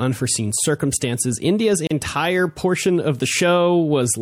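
A speech clip with a gap at a join of encoded pieces from 1.87 to 1.91 s, just before "portion of": a roughly 36 ms silence left by untrimmed encoder delay and padding, seen as a flat waveform stretch and a narrow blank vertical band on a spectrogram.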